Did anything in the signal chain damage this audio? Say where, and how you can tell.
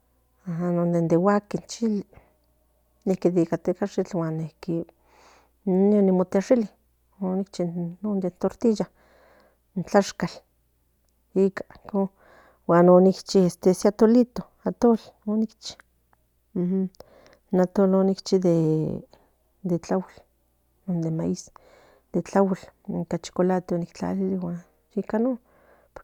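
No, nothing in the signal chain has damaged this speech recording. No stage from capture to playback leaves any audible mark that would point to a fault.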